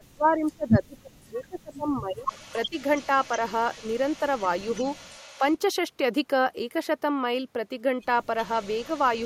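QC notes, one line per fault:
0.0–2.3 s and 2.53–2.74 s, speech suppressed in double talk. The speech dips hard, by about 30 dB at worst across roughly two seconds, then briefly by about 15 dB. The echo canceller likely mistook overlapping talk for echo and turned everything down.
2.28–5.56 s and 8.38–9.26 s, echo leak. A faint delayed copy of the speech trails 366 ms behind, about 30 dB below it. The far end's loudspeaker echo was likely not fully cancelled, so its microphone sent the leftover back.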